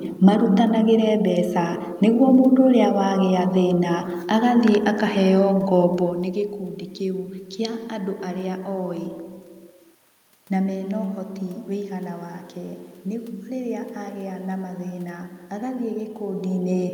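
No system faults in this speech recording; the background noise belongs to the room, and the level changes around 6 s and again near 16 s are the talker shifting position at the microphone.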